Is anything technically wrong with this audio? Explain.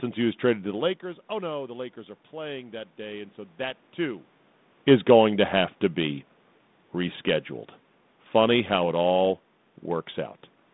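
Yes. Automatic gain rising, 1.0 to 4.34 s: the input dropped about 18 dB, so the gain control slowly added about 4 dB. Voice and background noise swell together, seen as a gradual envelope ramp and spectrogram brightening.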